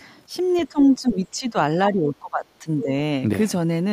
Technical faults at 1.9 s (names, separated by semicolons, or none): speech suppressed in double talk